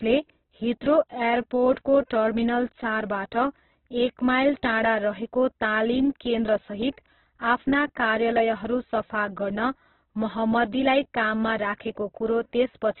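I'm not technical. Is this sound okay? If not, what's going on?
No, it isn't. From start to finish the speech sounds muffled, rough and grainy, with nothing above about 4.2 kHz, so it's dull like an old phone line. That's likely Opus compression squeezed very hard, throwing away the top end and leaving a gritty texture.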